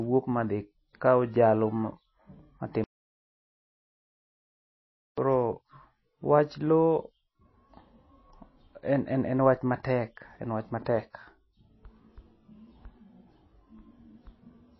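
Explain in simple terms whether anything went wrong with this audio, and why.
The speech has been squeezed hard to save space, most likely by MP3 compression. The encoder throws away everything above about 5.8 kHz and drops quieter detail, so the voice sounds dull and watery throughout, with s sounds losing their crispness.

A related pre-echo appears from 5.15 to 5.17 s. The compression spreads its noise across a short block, so a sudden sound arriving late in that block gets a brief hiss of about 22 ms just before it, leaving the attack soft and smeared.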